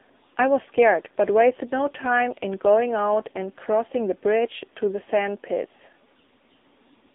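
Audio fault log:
Throughout: AMR narrowband mobile codec, band confined to 250 Hz–3.7 kHz with buzzy, synthetic speech, which fits a low bitrate near 6.7 kbps, unlike plain band-limiting, which stays natural.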